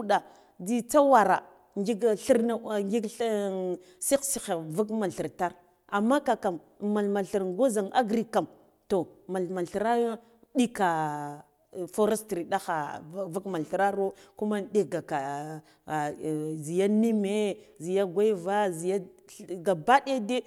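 At 13.48 s a GSM phone buzz breaks in over the speech and stops at 13.75 s, a burst of about 0.27 s. A nearby 2G handset was transmitting in bursts at about 217 Hz, and the audio circuitry rectified those radio pulses into the signal path. The result is a hard, raspy buzz at 217 Hz, rich in harmonics and unrelated to the speech, sitting about 26 dB below it. The single short burst points to a data transfer rather than a call.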